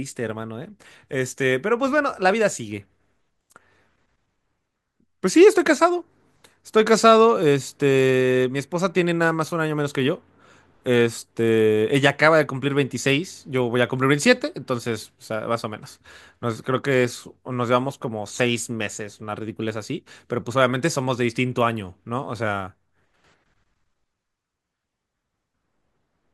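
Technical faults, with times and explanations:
No technical faults can be heard anywhere in this recording.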